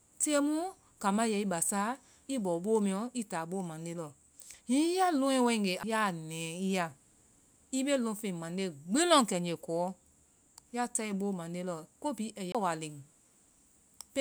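At 5.83 s there's a CD skip: the laser loses its track and lands on another turn of the spiral, so you get a tick and a very brief mute. The speech then carries on from a different spot. It happens again from 12.52 to 12.55 s with a longer gap, around 30 ms.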